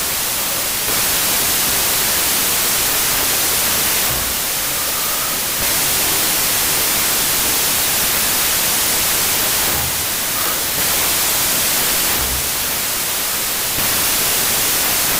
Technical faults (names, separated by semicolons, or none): wrong sample width